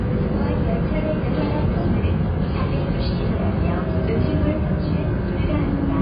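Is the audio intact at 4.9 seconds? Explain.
No, at 4.9 seconds the audio still carries the AAC compression damage that runs through the whole clip. Nothing comes through above 5 kHz, and what remains sounds dull, smeared and fizzy. That's likely heavy AAC-LC quantisation at a low bitrate, around 16 kbps.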